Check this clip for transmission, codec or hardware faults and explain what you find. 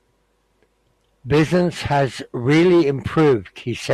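No transmission, codec or hardware faults are audible here.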